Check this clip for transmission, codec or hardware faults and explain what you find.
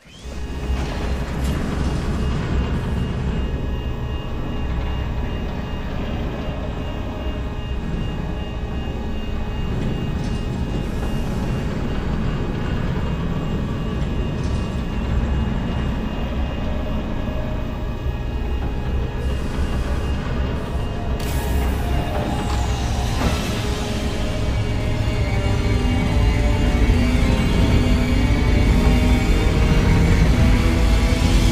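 No faults detected.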